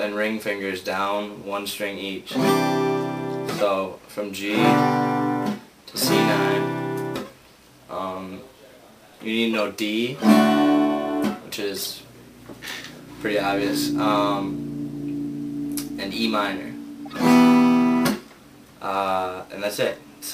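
Four short, unnatural chirps or bursts of noise cut through the audio, at 0.81 s, 9.53 s, 11.68 s to 11.87 s, and 17.05 s, the other three lasting well under a tenth of a second and the third lasting nearly a fifth. These are corrupt frames decoded: damaged bits in a few compressed frames were played anyway, so misread gains and codes put energy at the wrong frequencies. The loudest reaches about -15 dBFS, and the quietest sits near -30 dBFS.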